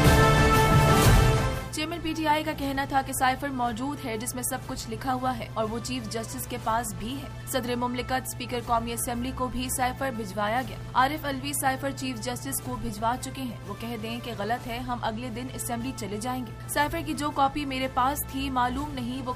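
A ground loop or a nearby transformer is coupling the 60 Hz power line into the signal, producing mains hum that runs through the whole clip. It sits as a steady low tone with some low harmonics, roughly 15 dB under the sound, prominent enough to be heard beneath it.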